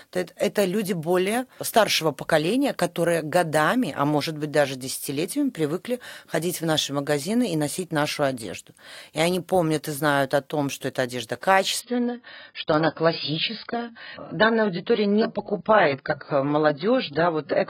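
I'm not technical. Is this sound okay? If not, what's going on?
No. At about 11.8 s, right after "том что эта одежда", the speech suddenly turns dull and more distorted, and it stays that way to the end. This is an adaptive stream at a lower bitrate. The stream switched to a much lower-quality version, probably because the connection slowed. There is no gap, just an abrupt drop. Everything above about 5.1 kHz is gone, so the crisp, bright part of the sound disappears.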